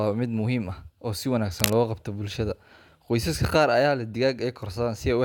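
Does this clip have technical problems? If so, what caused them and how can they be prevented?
Yes. From 1.52 to 1.75 s a burst of dense, uneven scratching sits over the speech, only slightly quieter than it. This cable scratch noise is likely from a worn cable or connector being moved, its contact resistance fluctuating rapidly. Replace worn cables and connectors, and keep them still while recording.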